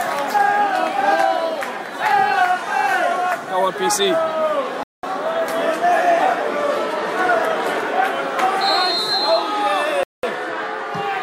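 At 4.83 to 5.03 s and again at 10.03 to 10.23 s, the sound drops out for 200 ms. These are gaps between chunks. The audio arrives in 5-second pieces, and silence sits at each join. Nothing is lost, but the sound is interrupted at each join.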